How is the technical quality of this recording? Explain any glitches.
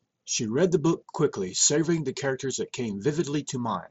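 The technical quality of this recording shows no glitches to explain.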